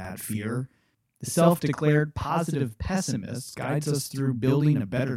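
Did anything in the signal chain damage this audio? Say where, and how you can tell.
Yes. At the driver or buffer stage, one channel runs about 46 ms late, which fits a 2048-sample buffer, and the two are summed to mono. That channel delay (doubling) leaves an equal-level slap copy trailing the speech across the whole clip.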